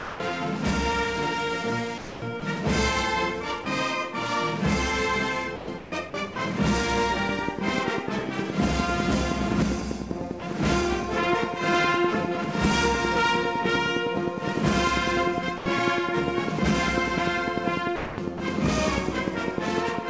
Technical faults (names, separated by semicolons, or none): sound dropped by the voice detector; sound chopped by the voice detector; train of clicks